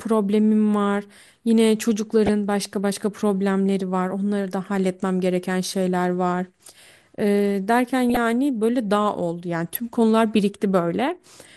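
MP2 compression is the likely cause of the plainly audible dull, gurgling, granular texture throughout this speech recording, with upper sub-bands dropping out at a rate that fits around 80 kbps. DAB burbling from residual bit errors in weak reception puts short blips of noise into single sub-bands at 0.43–0.53 s, 2.26–2.29 s, 4.44–4.63 s, 8.10–8.17 s and 9.75–9.79 s.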